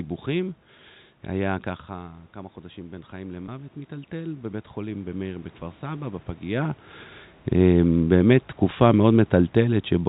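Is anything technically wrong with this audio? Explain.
Yes, there are three faults. From 1.89 to 6.7 s, the voice and room noise swell together by about 8 dB. This is automatic gain rising: the control is compensating for a drop of about 12 dB after the talker moves back around 1.5 s. At 3.46 to 3.48 s there is a brief buzzy, held tone. This is packet loss with pitch repetition: a 20 ms gap is bridged by repeating the last pitch period. From 7.58 to 9.88 s, voice and background sink together by about 3 dB. This is automatic gain falling, as the control lowers its gain.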